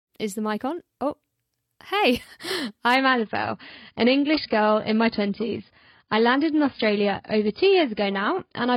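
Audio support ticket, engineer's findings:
Adaptive stream at a lower bitrate, 2.96 s to end. Sudden, gapless loss of treble, with nothing above 5.1 kHz and stronger codec artefacts on the speech. Probable component: player's rate adaptation, switching down to a low-bitrate AAC rendition, consistent with roughly 16 kbit/s.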